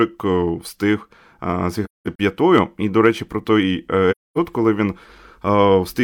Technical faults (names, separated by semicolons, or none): AAC frame loss with muting